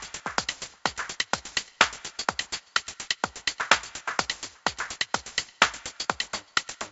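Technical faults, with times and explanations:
No technical faults are audible.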